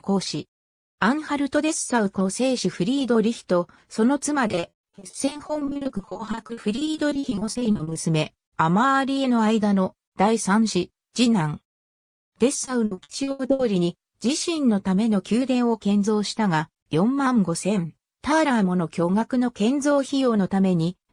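Two stretches of repeated packet loss (robotic sound) break this audio up, from 4.47 to 7.97 s and again from 12.65 to 13.61 s. Packets kept going missing in quick succession, dozens of holes in the first stretch, and each one was papered over by stretching the last bit of sound. Around two-fifths of both spans ends up concealed, with gaps up to 60 and 80 ms, so it comes across as choppy with chunks dropped out.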